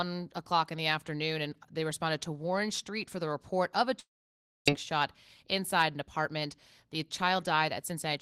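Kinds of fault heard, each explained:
Long network dropout: from 3.99 to 4.70 s, just after "the report of a", the sound is carried on as a fading buzz, then about 0.59 s of near-silence, and it resumes with roughly 0.6 s missing. This is likely audio that never arrived and was concealed by the receiver.
Jitter buffer speed-up: from 5.27 to 6.04 s the receiver trims short pitch-period slices to shrink excess buffered delay, about 50 ms in total. The audio runs at 107% speed with its pitch unchanged, sounding slightly hurried.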